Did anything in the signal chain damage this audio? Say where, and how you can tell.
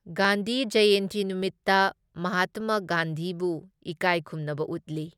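Yes. The damage sits at the driver or buffer stage. A brief click or pop sits on the speech at about 0.25 s and recurs every 1.18 s through about 4.96 s, roughly five events at an unvarying spacing. That steady rhythm points to clock drift buffer slips, likely between two devices whose clocks disagree by a few hundred ppm. The buffer between them creeps until a small block of samples, around 15, is dropped or repeated, leaving a discontinuity each time.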